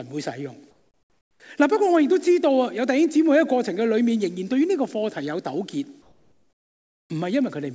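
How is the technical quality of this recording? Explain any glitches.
Two short stretches of comfort noise in place of the background, from 0.71 to 1.40 s and from 6.02 to 7.10 s. In these pauses the real background gives way to a flat, featureless hiss, about 8 dB and then about 6 dB quieter. This likely comes from discontinuous transmission, with the receiver synthesising noise instead of the room's background. On a spectrogram these gaps appear as uniform, textureless bands. On a waveform they show as a sudden step down to an even, lower noise floor. Across the whole clip, the spectrogram is empty above 8 kHz, which fits a wideband call codec such as G.722.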